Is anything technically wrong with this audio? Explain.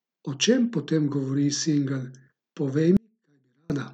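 Yes, there is an audio dropout to a faint residue from 2.97 to 3.70 s. The wanted signal was likely interrupted somewhere upstream while the path after the break stayed live, so for about 0.73 s only a faint leak gets through, roughly 40 dB below normal level. The speech cuts out abruptly rather than pausing or fading, leaving a near-silent gap of faint sound before it returns just as suddenly.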